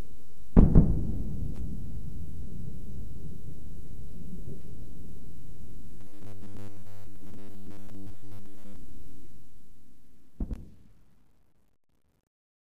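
A recording of everyday sounds with two separate faults. From 5.99 to 8.76 s the sound turns rigid and metallic, with a steady buzz at 100 Hz riding on it. This is robotic sound from repeated short buffers, likely caused by audio arriving too late so that the playback repeated its last 10 ms chunk instead of the missing material, with most of that stretch replaced by repeats. On a spectrogram this shows as a comb of harmonics spaced 100 Hz apart and fine vertical striping every 10 ms. In the waveform, near-identical 10 ms cells repeat back to back. The clip then fades out from about 9 s to 12.8 s. From 9.12 s to the end it carries truncation distortion on a fade: the level stage works at only 11 bits with no dither. The tail grows gritty and is at its worst from 10.56 s to the end. In the waveform the quiet end becomes a staircase of a few square steps. On the spectrogram, a broadband, signal-following grit appears where a clean decay should be.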